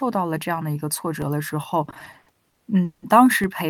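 At 1.22 s a DC step occurs. The waveform's zero line jumps abruptly, then drifts back at a rate consistent with a 5 Hz high-pass. The step registers as a brief low thump while the speech carries on unaffected.

From 1.85 s to 3.04 s the audio shows repeated stalls (stutter). Nine times in that span, late-arriving packets left the jitter buffer empty, and the receiver extended the previous sound to cover each wait, the longest about 180 ms. Roughly 450 ms is filled this way, about 38% of the span, with nothing actually lost. The speech drags and stutters through this section.

A second DC step hits at 3.44 s, with the same sudden offset, the same decay matching a 5 Hz high-pass, and another low thump.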